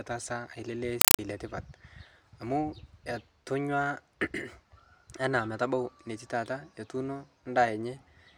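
From 1.01 to 1.19 s the speech turns to loud, chattering static: a compressed stream played as audio, undecoded AC-3 arriving in short bursts 31 times a second.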